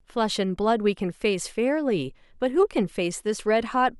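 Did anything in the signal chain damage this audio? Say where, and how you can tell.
No, nothing in the signal chain audibly damaged this speech, as its level, continuity and tonal balance hold steady with no dropouts, distortion or timing disturbances at any point.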